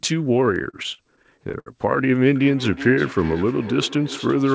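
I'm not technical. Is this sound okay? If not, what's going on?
No, there are two problems. From 0.46 to 1.68 s you get repeated stalls, or stutter. The audio arrived late in 14 short hiccups, and the system stretched the last bit of sound to cover each wait, the longest about 66 ms. Nothing's actually lost, but the speech drags and judders.

Then from 2.36 s to the end there's feedback echo between two devices. Two devices on the same call are in one room, so one device's speaker feeds the other's microphone. The speech comes back roughly every 0.4 seconds, quieter than the original and thin and ringy.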